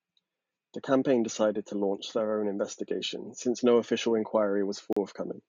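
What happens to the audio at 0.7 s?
Nothing goes wrong at 0.7 s: the speech there runs on intact, with no dropout, click, distortion or other audible fault.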